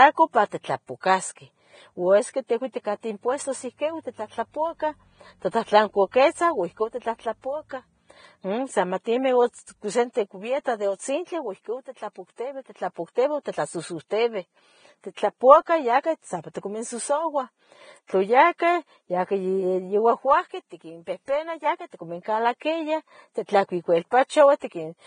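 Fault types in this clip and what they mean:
Vorbis compression: The speech sounds hissy and grainy throughout, with nothing above 9.7 kHz, which points likely to heavy low-bitrate Vorbis coding near 22 kbps. On a spectrogram there is a hard ceiling at 9.7 kHz and speckled, noisy treble where fine harmonic detail should be.
pre-echo: At 18.58 s a sharp attack is preceded by about 18 ms of hiss, because the codec spread its block's quantisation noise ahead of the transient. The waveform shows low-level noise creeping in just before the onset, and the spectrogram shows a smeared broadband haze there.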